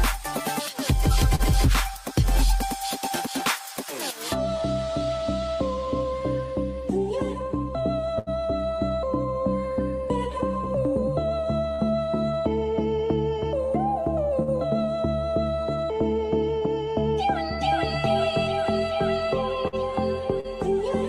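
The audio carries brief smears or wobbles at 1.35, 11.74 and 20.40 s. This is short concealed packet loss: about 40 ms of data each time arrived too late to decode, and the receiver extended the preceding sound for roughly 35 to 40 ms before blending back. Longer held, fading stretches occur at 8.19, 14.42 and 19.68 s. These are bursts of packet loss, with about 80 ms missing at 8.19 s and 40 ms at the other two. Each gap was filled by continuing the last sound while lowering it, after which the audio resumes further along with the lost portion gone.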